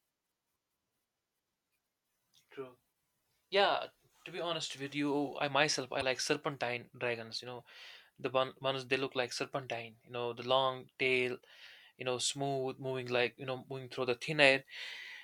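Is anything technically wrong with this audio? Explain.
Yes. At 5.99 to 6.03 s, right after "with you I myself" and before "serpentine dragons", a brief glitch marks damaged data in a compressed stream: corrupted bytes there make the decoder lose frame sync and skip forward to the next readable frame.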